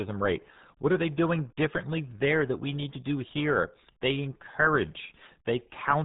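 RealAudio 14.4 codec damage runs throughout the speech, from start to finish. Nothing passes above about 3.8 kHz, so the voice is dull and muffled, and heavy coding leaves a gargly, smeared texture that points to a very low bitrate near 8 kbit/s.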